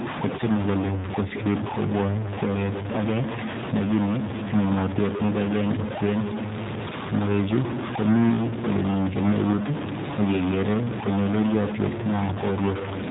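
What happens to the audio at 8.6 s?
At 8.6 s the speech carries two faults, and both run through the whole clip rather than starting there.

The first is a distortion that sits on top of the speech. It does not come and go with the moment. In the gaps between phrases a noise floor remains instead of silence. The likely cause is a stuck bit, one data bit held at a fixed value, so about half the samples are pushed off by that bit's weight. The error follows the waveform's shape and keeps flipping around small values near zero.

The second is the sound of the G.729 codec. Nothing above 3.8 kHz passes, so the speech is narrow and lacks air and sibilant detail. The codec damage is plainly audible. The speech stays intelligible but sounds rough and slightly synthetic, because it is rebuilt from a vocal tract filter, a pitch predictor and a few pulses per frame. The band limit and texture fit an 8 kbit/s stream.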